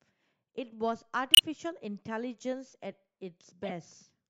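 At 1.34–1.40 s and 3.63–3.71 s, a corrupt frame decoded: flipped bits in a few compressed frames misplace spectral energy, giving brief chirps, squeaks, blips or noise bursts, the first louder.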